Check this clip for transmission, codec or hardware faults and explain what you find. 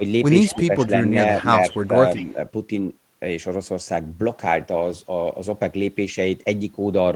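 Two faults show up, both tied to echo cancellation.

Echo leak appears at 0.46 to 0.65 s, 1.71 to 1.88 s and 2.15 to 2.25 s. A faint copy of the speech trails about 181 ms behind, well below the main voice. A far-end loudspeaker echo likely slipped past the canceller.

Speech suppressed in double talk occurs at 0.53 to 0.91 s and 2.17 to 2.38 s. The voice dips, by roughly 10 dB then 5 dB, while the echo overlaps. The canceller likely ducked both.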